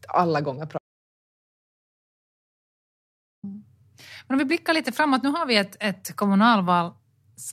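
An audio dropout to silence runs from 0.78 s to 3.43 s, just after "alla gånger". The speech stops mid-flow and about 2.65 s of silence follows, with no room tone or background underneath, before the speech returns abruptly. That dead-flat gap means the recorder kept writing silence while its input was absent, most likely from a momentary disconnection, a failed link or an accidental mute, so whatever was spoken in that stretch is lost.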